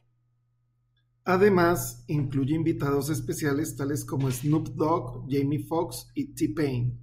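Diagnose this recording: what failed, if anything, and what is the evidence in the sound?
Nothing failed; no faults heard.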